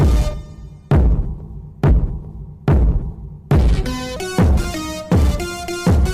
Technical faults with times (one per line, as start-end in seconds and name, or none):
1.90 compressed frames skipped
3.11 compressed frames skipped
4.16-6.13 section at the wrong speed